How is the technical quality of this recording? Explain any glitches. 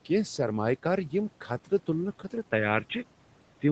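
The recording has one clear glitch, near the end. From 2.52 s to the end, the speech suddenly turns dull and boxy. The band narrows from the 8 kHz it had before. There is no gap at the switch, and the level barely changes. A faint new background noise appears well below the speech. The likely cause is an input switched to a poorer device, such as another microphone or a headset's call profile. That device passes a narrower band and adds its own noise.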